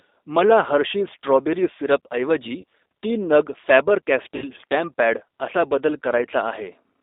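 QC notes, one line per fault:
Throughout: G.729 codec. The speech is confined to roughly 300 Hz–3.7 kHz and sounds slightly rough and synthetic, plainly audible here. This fits G.729A at 8 kbit/s, which rebuilds each 10 ms frame from a vocal tract filter, pitch predictor and sparse pulses.
2.61–2.64 s and 4.36–4.51 s: VoIP packet loss concealed by the speech codec. About 30 ms, then 60 ms, of audio is missing. This fits one and then two lost packets. The decoder extends its last pitch and filter into a fading buzzy tone or coloured noise. At 4.36 s, distortion persists past the gap while the frame-to-frame state recovers.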